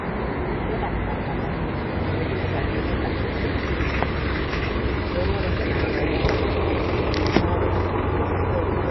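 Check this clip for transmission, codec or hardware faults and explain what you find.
There's one problem, and it runs the whole way through: MP3 compression damage. Nothing gets through above 5.8 kHz, and the watery, swirly smearing points to a low bitrate around 24 kbps, likely from an MP3 encoder starved of bits.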